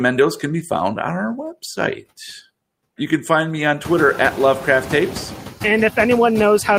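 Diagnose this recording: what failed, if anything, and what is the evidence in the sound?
The failure is in call processing: noise suppressor artifacts run through the whole clip. Background noise drops by about 19 dB between phrases and swells back under speech. The room noise rises about 20 dB near 4 s. The suppressor is gating bands frame by frame.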